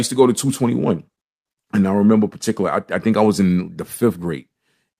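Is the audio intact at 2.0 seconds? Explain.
Yes, at 2.0 seconds the speech runs intact, with no dropout, click, distortion or other fault to be heard at that moment.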